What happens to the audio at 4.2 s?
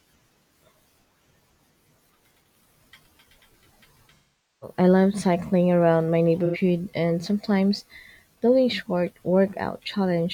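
AAC frame loss with concealment runs from 4.15 to 4.76 s. The decoder rebuilds the missing frames from the last good spectrum, which fits about eleven frames, leaving a smeared gap that fades.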